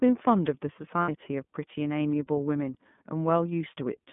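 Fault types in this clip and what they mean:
iLBC codec: The whole clip of speech has passed through iLBC, a narrowband VoIP codec that codes each frame's excitation on its own, here with frames that sound about 30 ms long and a bitrate that fits the 13.33 kbps mode. Nothing sits above roughly 3.5 kHz, and the voice has a plainly audible rough, synthetic edge. On a spectrogram the energy stops at a hard ceiling near 3.5 kHz, with a thin low end below about 150 Hz.
lost iLBC frames: From 1.02 to 1.09 s, about 60 ms of audio went missing, which fits two lost 30 ms frames. The decoder filled the gap by repeating the last pitch cycle blended with noise, so it sounds like a held, faintly buzzy vowel. Because iLBC frames stand alone, the speech recovers right after. On a waveform the gap shows as a run of near-identical periodic cycles, and on a spectrogram as flat, unchanging harmonics.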